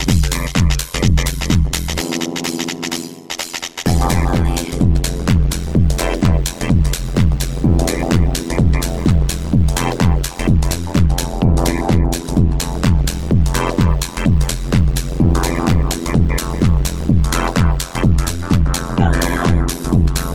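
A metallic buzz with extra tones around each note runs through the whole clip, a buzzy robotic ripple at around 100 Hz with the level dipping by about 60 dB each cycle. This is overlap-add ripple: windowed frames were recombined with overlaps that never sum to constant gain, so loudness pulses once per frame.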